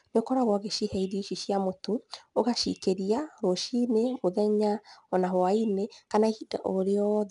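4-bit ADPCM compression runs throughout the speech. Each sample is coded as a coarse 4-bit step from a prediction, so a gritty hiss rides on every loud syllable. Nothing is present above 10.7 kHz, which fits a low sample rate near 22 kHz and about 89 kbps.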